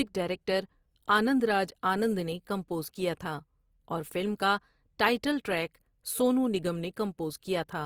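Across the whole speech clip, plainly audible Opus compression damage is heard: the sound turns grainy and rough rather than swirling as MP3 does, because thin bands are filled with noise, not left empty. The likely cause is the music (CELT) mode at a low rate, consistent with about 24 kbps, with content reaching 20.3 kHz.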